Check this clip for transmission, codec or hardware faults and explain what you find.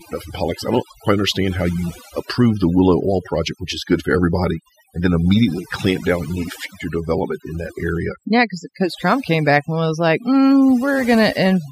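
One processing fault runs through the whole clip, overdone noise removal, and it comes from heavy noise reduction on a noisy recording, not from transmission or hardware. The suppressor pushed individual frequency bands down whenever they resembled its noise estimate, so soft speech detail vanished alongside the background noise. The result is a lowered background dotted with twinkling specks.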